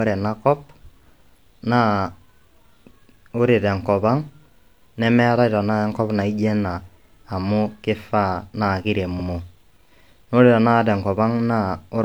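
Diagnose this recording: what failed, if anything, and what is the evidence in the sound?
Repeated frames in the codec or storage stage: at 4.60 to 4.69 s and again at 9.15 to 9.25 s, a 92.9 ms stretch of the speech plays twice in a row, heard as a short stutter. The length fits a run of two compressed frames being written or delivered twice, so the decoder rendered the same audio again and each event added 92.9 ms. On a waveform or spectrogram, the identical block appears back to back at each time.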